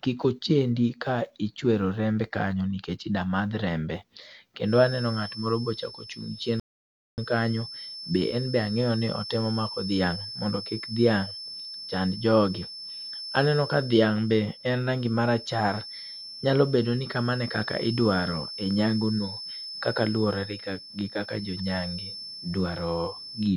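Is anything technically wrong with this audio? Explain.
Yes, there are two faults. From 4.6 s to the end, a thin, steady whistle near 5.3 kHz sits well below the speech and swells and fades slowly in level. This is likely a feedback whistle: the loudspeaker-to-microphone loop is held right at the edge of feedback, so one frequency keeps ringing without building up.

At 6.60 s the speech drops to silence, then picks up at 7.18 s exactly where it left off. This rebuffering stall occurred because the player ran out of downloaded audio and waited for more. Nothing is missing, but about 0.58 s of dead air is added.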